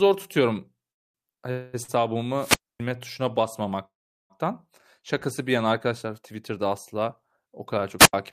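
From 0.91 to 1.16 s the speech breaks off for about 230 ms of silence, then picks up exactly where it stopped. This call audio freeze likely comes from delayed packets leaving the jitter buffer empty. From 1.34 to 1.39 s a sound is held about 28 ms too long with a slight buzz or dip, a short stall from a late packet. The receiver stretched the last sound until the packet arrived, and nothing is lost. From 1.51 to 1.75 s there is a second call audio freeze. Here the last sound is carried on as a fading buzz or hiss for about 220 ms rather than going silent, and this too is likely a stall in packet delivery. From 1.83 to 1.90 s a sound again drags, this time for 50 ms, another short stall from a late packet. From 2.35 to 2.82 s hiss swells, the audio drops to near silence for about 260 ms, and then the speech returns. This is a wireless microphone squelch dropout, where a fading radio signal made the receiver mute its output. 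From 3.85 to 4.32 s comes the longest call audio freeze, about 450 ms in total with roughly 400 ms of silence. The speech then resumes from the same point, likely after held-up packets finally arrived. From 7.98 to 8.13 s a second, shorter squelch dropout brings a burst of hiss and a mute of about 80 ms.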